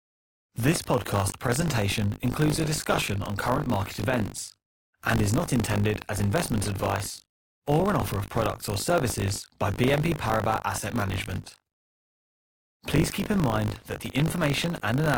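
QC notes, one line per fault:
throughout buffer tearing: steady robotic 50 Hz rattle on the speech, gone in pauses. Each 20 ms period has about a tenth replaying audio roughly 40 ms old. The waveform shows hard joins every 20 ms, and the spectrogram shows regular vertical striping at 50 Hz.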